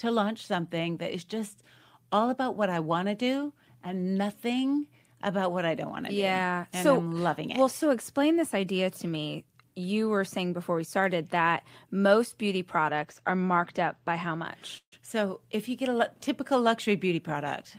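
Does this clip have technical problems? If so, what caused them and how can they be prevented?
Yes. Three problems can be heard.

From 12.90 to 14.46 s, just after "started that most beauty", there is channel delay (comb filtering). One channel lags the other by about two samples, a fraction of a millisecond, and the two are summed. Cancellation puts a fixed notch near 10 kHz, which dulls the top end. Unlike codec dullness, the notch stays put. Keep the channels sample-aligned before downmixing to mono.

From 14.77 to 14.94 s there is a call audio freeze, likely caused by packets held up in transit that left the jitter buffer empty. The last sound is stretched for 146 ms and ends in 80 ms of silence. The audio then resumes with nothing missing, which separates it from a dropout. A steadier network or a deeper jitter buffer prevents it.

From 16.88 to 17.64 s, jitter buffer speed-up runs the audio at 108% speed. 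Roughly 70 ms of pitch-period slices are cut to shed excess buffered delay. The pitch stays the same, unlike resampling, but the delivery sounds hurried. Smoother network delivery avoids the backlog.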